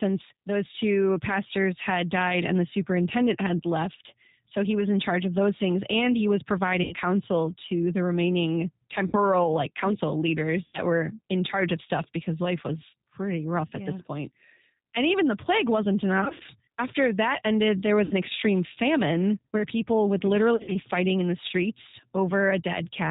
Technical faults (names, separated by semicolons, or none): G.729 codec; VoIP packet loss concealed by the speech codec